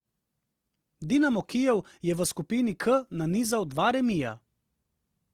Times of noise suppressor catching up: none

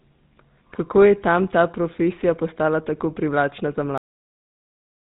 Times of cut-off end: 3.98-5.01

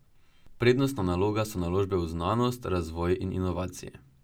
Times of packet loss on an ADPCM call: none

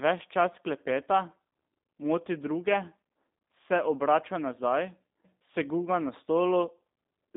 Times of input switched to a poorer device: none

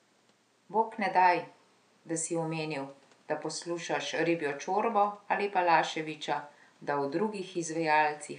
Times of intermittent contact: none

